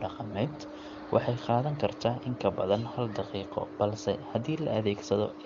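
Nothing faulty is audible anywhere in this speech recording.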